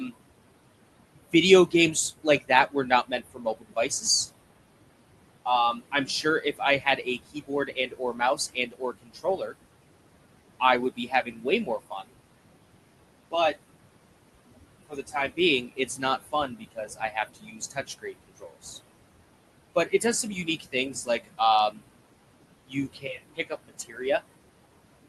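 Noise suppressor artifacts run through the whole clip: the suppressor pulls steady noise down by about 21 dB between phrases. Speech cut by the noise suppressor occurs between 1.15 and 4.03 s, 5.46 and 9.55 s, 10.6 and 12.11 s, 14.89 and 18.66 s, 19.75 and 21.84 s, and 22.66 and 24.22 s, with dips of about 18 to 22 dB. Each span loses roughly half a second to a second and a half of soft consonants and word endings, which sound swallowed. These appear as sudden gaps in the waveform envelope and as missing faint energy on the spectrogram.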